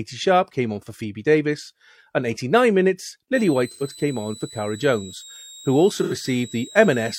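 Switching supply whistle enters the speech at 3.35 s and persists to the end: a high tone of roughly 4 kHz, drifting between 3.72 and 4.12 kHz, sitting about 20 dB below the signal, from a switching power supply running in an audible burst mode or beating with another one. AAC frame loss with concealment hits at 3.71–3.84 s and 6.03–6.14 s. Each gap of roughly 85 ms points to two lost frames, patched by the decoder from the last good spectrum, leaving a brief smeared, noisy stretch.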